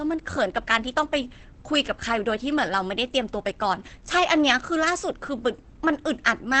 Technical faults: Opus compression

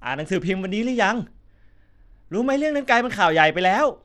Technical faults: Bluetooth SBC compression

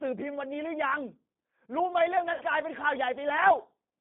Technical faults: G.729 codec; VoIP packet loss concealed by the speech codec

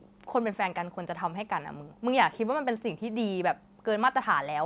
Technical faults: none

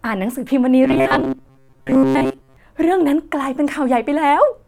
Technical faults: robotic sound from repeated short buffers

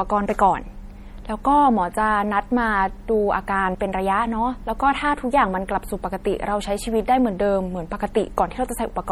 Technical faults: MP3 compression

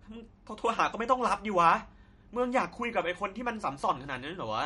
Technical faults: MP3 compression

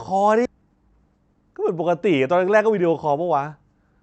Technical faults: skip ahead; jitter buffer speed-up

